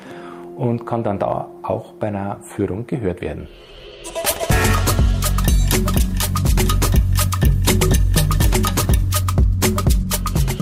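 Nothing in the audio stood out as a technical problem on listening.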